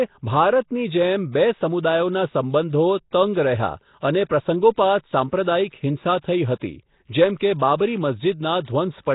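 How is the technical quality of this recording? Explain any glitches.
The technical quality is poor, with heavy coding damage throughout the speech. From start to finish the sound is rough and hissy, with a smeared, underwater character and nothing above 3.8 kHz. The likely cause is Nellymoser compression: the codec codes each block with only two bits per sample, so weaker bands get no bits and are filled with noise. The damage fits a low rate around 16 kbps.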